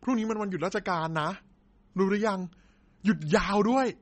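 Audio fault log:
Throughout: MP3 compression artefacts, plainly audible. Nothing is present above 8.4 kHz, so the speech is dull and band-limited, with a watery, swirling texture and smeared onsets. This is likely from an MP3 encoder starved of bits, which fits a bitrate around 32 kbps.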